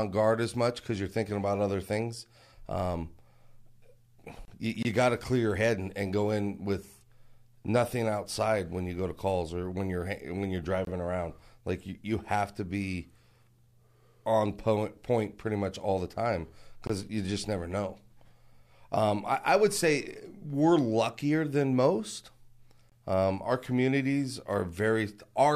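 A gap at a join of encoded pieces opens at 4.45 to 4.48 s, a 29 ms silence cutting into continuous speech. Two separately encoded segments were joined without trimming the encoder's start-up delay and end padding, so the speech halts with smeared edges and resumes where it stopped.

A gap between chunks follows at 4.83 to 4.85 s, just before "got to clear your", then recurs every 6.0 s: at 10.85 to 10.87 s after "when you're when you're", at 16.87 to 16.90 s, and at 22.90 to 22.92 s after "luckier than most". Each is a 23 ms hole where silence sits between chunks. Nothing is lost; the speech is simply interrupted at each join.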